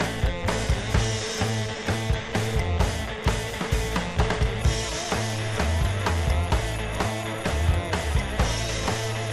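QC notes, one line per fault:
No fault found.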